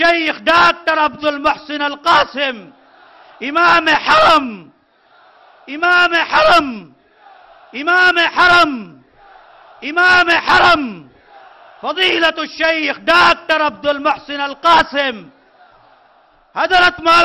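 Nothing in the audio stood out as a technical problem on listening.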